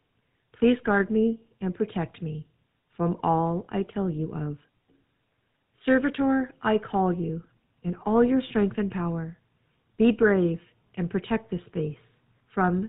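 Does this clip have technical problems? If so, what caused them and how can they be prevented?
Yes. The speech is affected throughout by the GSM full-rate codec. The voice has a buzzy, gravelly roughness, and nothing above about 4 kHz gets through, which fits the 13 kbps full-rate mobile codec. The codec rebuilds each voice from a vocal-tract model driven by a coarse, regularly spaced pulse train. Simple telephone band-limiting would only sound muffled, but here the rough, pulsed buzz is plainly audible. To prevent it, record or route the call over a wideband path instead of legacy GSM.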